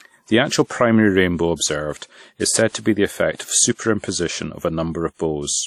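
Throughout the speech, a washy, ringing quality and a hiss that swells and fades with the signal point to transform-codec damage, likely WMA compression at a bitrate near 48 kbps. Nothing sounds above 15.4 kHz, and unlike broadband noise, the hiss tracks the voice.

Pre-echo follows from the same coding. Before sharp onsets at 1.56–1.60, 1.98–2.02, 2.69–2.73, 3.35–3.39 and 3.74–3.79 s, a short hiss of 38 to 49 ms leads each attack, which arrives softened. Reverb would trail the sound instead.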